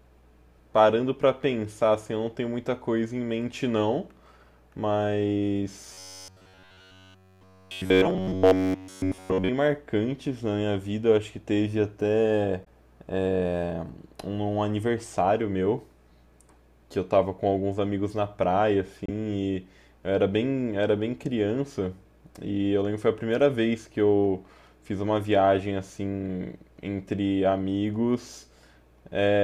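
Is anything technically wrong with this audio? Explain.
Yes, there are two kinds of fault.

From 5.93 to 9.49 s there is robotic sound from repeated short buffers. New audio likely arrived too seldom, so playback kept re-sending the last buffer, essentially throughout that stretch. The repeats impose a steady buzz at about 94 Hz, which fits a roughly 10.7 ms buffer, turning the speech metallic and rigid.

There is also damaged data in a compressed stream at 12.61 to 12.67 s and again at 19.06 to 19.09 s. Corrupted bytes made the decoder misread those frames and lose sync until it found a valid frame header. Each spot comes through as a short glitch breaking the speech.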